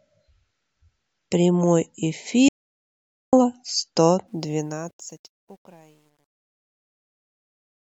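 From 2.49 to 3.33 s an audio dropout to silence leaves 0.84 s of silence with no room tone, unlike a quiet pause, likely from lost input. From 4.28 s the fade-out shows truncation distortion on a fade. Its grit points to roughly 10-bit stepping without dither, and it is worst from 5.18 s to the end.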